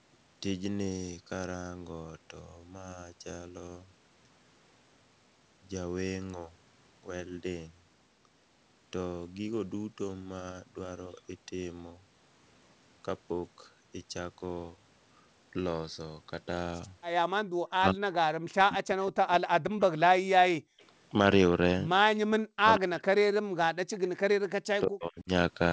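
From 17.7 to 19.32 s and again from 19.64 to 20.1 s, the voice sinks by roughly 40 dB in broken chunks. That's most likely speech suppressed in double talk: with both ends talking, the echo canceller couldn't tell this talker from loudspeaker echo and ducked everything.

Between 20.6 and 20.8 s the room sound drops out for a brief moment, about 38 dB down, then comes back. That's background gated by the echo canceller, clamping the microphone hard while the far end's loudspeaker was playing.

Right after, at 20.81–20.85 s, there's a tiny, faint scrap of delayed voice, roughly 40 dB under the speech and lagging by 181 ms. That's most likely an echo leak, where the far side's canceller let some of its loudspeaker pickup slip back. It shows up again at 23.94–23.99 s, a bit louder at about 30 dB down.

The suppression pattern returns from 22.22 to 24.31 s and from 24.79 to 25.28 s, with the voice again chopped and pulled down by around 40 dB.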